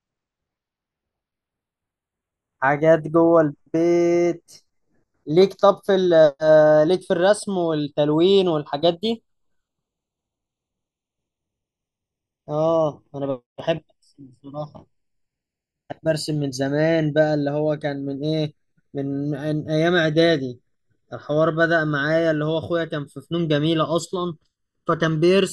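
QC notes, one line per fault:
Throughout, channels drifting apart: the left and right channels run on separately clocked devices differing by about 20 parts per million, so their offset creeps to under a millisecond by the end. Summed to mono, comb-filter notches sweep slowly across the speech, heard as gradual flanging.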